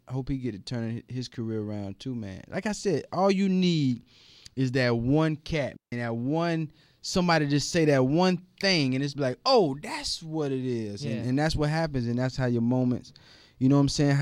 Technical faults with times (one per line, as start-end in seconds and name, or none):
5.76-5.92 digital wireless dropout